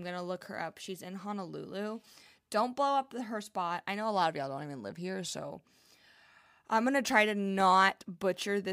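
At 7.60 to 7.64 s a single loud pop jumps well above the speech, likely a voltage spike from a switch or static, while talking carries on underneath.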